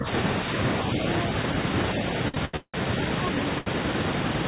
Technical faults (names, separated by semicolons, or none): speech suppressed in double talk; repeated stalls (stutter); short stall from a late packet